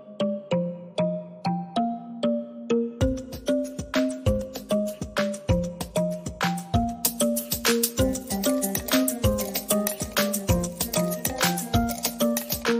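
From 7.05 to 12.63 s, pre-emphasis is left on: an FM 75 µs treble boost goes uncorrected, lifting 10 kHz about 14 dB over 1 kHz, so the sound turns thin, bright and sibilant.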